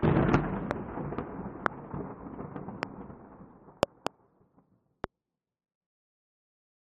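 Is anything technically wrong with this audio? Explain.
Yes. Loud pops occur at 0.71, 1.66, 2.83 and 5.04 s, plus a double pop from 3.83 to 4.09 s. Each peaks roughly 20 to 25 dB above the sound, likely from sudden voltage pulses such as static or switching.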